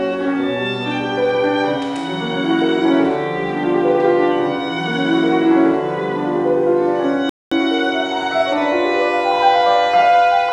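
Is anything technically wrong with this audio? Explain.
Yes. A playback stall runs from 7.29 to 7.52 s: the player likely ran out of buffered data or had its thread blocked, so the output fell silent for about 220 ms, cutting the sound off mid-flow before it resumed.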